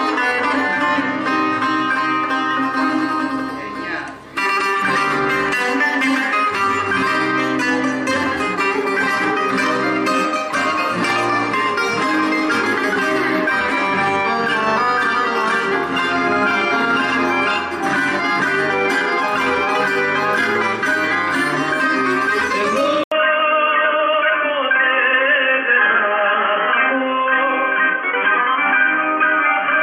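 The sound drops out for about 80 ms at 23.04 s, then stays dull and boxy to the end, with nothing above 3.3 kHz, the level about the same, and new background noise roughly 45 dB down. That's likely the input switched to a poorer device.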